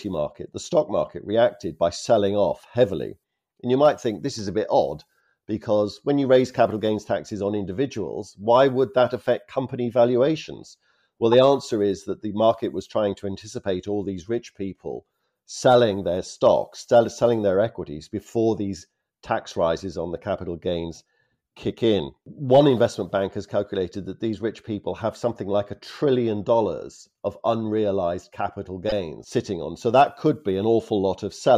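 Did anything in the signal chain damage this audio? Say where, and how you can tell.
Yes. Brief chirping blips at 11.32 s and from 28.89 to 28.92 s mark a corrupt frame decoded at the codec: flipped bits made the decoder misplace spectral energy.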